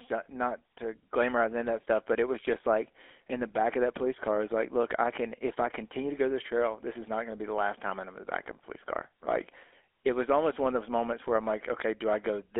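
From start to finish, the speech has passed through a GSM full-rate codec. Nothing survives above about 3.5 kHz, and pulse-driven vocal modelling leaves a plainly audible buzzy, gravelly roughness.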